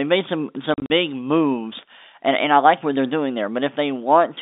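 Between 0.74 and 0.9 s, just after "made some" and before "big moves and and", the speech breaks into several short dead gaps with hard edges, the longest about 40 ms. This is packet loss filled with silence: about 100 ms of audio went missing, scattered across that 160 ms stretch, and the receiver played silence in each hole. The gap lengths suggest 20 ms packets, roughly five of them lost. Throughout, the G.711 telephone coding confines the sound to a narrow 250 Hz to 3.7 kHz line band.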